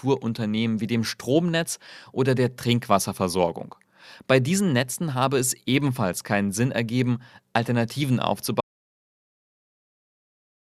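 At 8.61 s the speech cuts off abruptly in an audio dropout to silence that lasts the final 2.16 s, likely from lost input while recording continued. Unlike a natural pause or fade, the gap holds silence with no room tone at all.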